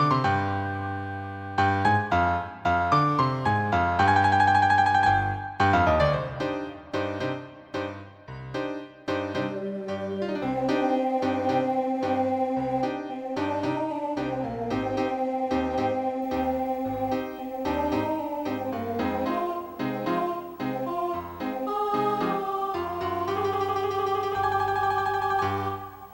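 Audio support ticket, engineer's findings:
Video or display buzz from 16.22 s to end: screen or video cable coupling into audio path. Buzz at 59.94 Hz field rate with hash, 15.7 kHz line tone, about 30 dB below signal.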